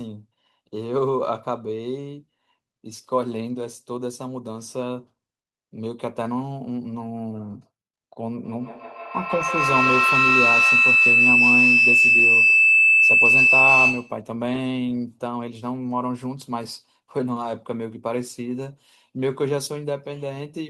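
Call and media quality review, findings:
Feedback howl, 8.44–14.27 s. Tone near 3 kHz climbs to about 8 dB above the speech, repeating roughly every 150 ms. Probable component: second device in the same room on the call, forming a mic-to-speaker loop with gain above unity. Each pass reinforces the loop's favoured frequency. Stops at 14.27 s when the loop breaks.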